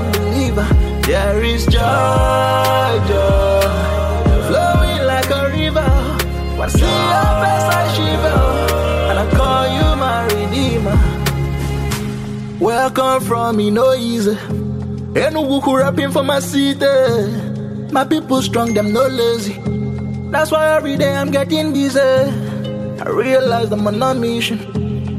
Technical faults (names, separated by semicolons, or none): damaged data in a compressed stream